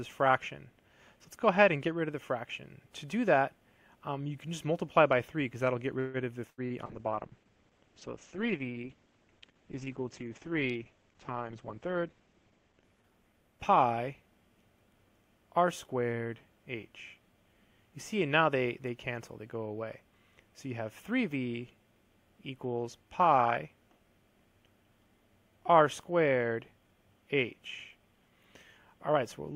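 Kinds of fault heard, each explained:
Call audio freeze: From 5.99 to 6.17 s the sound stretches into a fading buzz or hiss for about 145 ms, then picks up exactly where it stopped with nothing lost. This is likely a packet delay that drained the jitter buffer, adding 145 ms of lag.
Burst of packet loss: Between 6.50 and 6.61 s the sound is drawn out as a held buzz or fading hiss for about 77 ms before jumping ahead. Roughly 80 ms of audio is gone, lost in a run of packets the receiver papered over.
Short concealed packet loss: At 6.66 to 6.73 s there is a brief wobble lasting about 40 ms. The decoder missed 40 ms of packets and bridged the hole by extending the preceding sound, then blended back.
Call bitrate drop: From 6.89 to 15.38 s the audio turns muffled and watery as treble above 8 kHz disappears. The encoder fell from 128 to 9 kbps after the bandwidth estimate collapsed, staying at its lowest for about 5.8 s.
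Jitter buffer speed-up: Between 11.14 and 12.42 s the sound hurries along about 10 percent faster with unchanged pitch. The receiver trimmed tiny pitch-period slices, around 150 ms in total, to shrink an overfull buffer.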